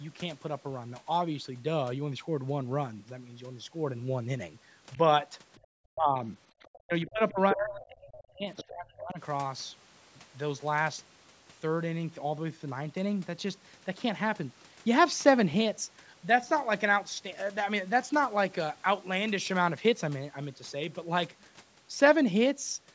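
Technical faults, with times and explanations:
5.55–5.67, 6.63–6.80, 7.07–7.11, 7.50–7.55, 8.18–8.24, 8.56–8.69 s: other side's voice leaking through. Scraps of a second talker show on the spectrogram as separate harmonic traces. They sit about 35 to 15 dB under the speech, and nearly level with it at 7.50 s, likely residual loudspeaker echo the canceller missed.
5.94–6.18 s: speech suppressed in double talk. The waveform envelope dips by about 25 dB. The spectrogram thins out, likely because the canceller turned everything down while both sides spoke.
6.84–9.20 s: speech suppressed in double talk. About two seconds of speech dip, up to about 30 dB down. The spectrogram thins out while the echo scraps appear.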